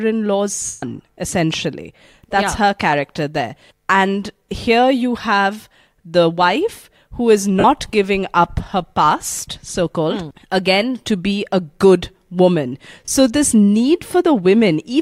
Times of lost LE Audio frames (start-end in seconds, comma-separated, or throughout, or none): 0.66-0.83, 7.59-7.65, 13.06-13.08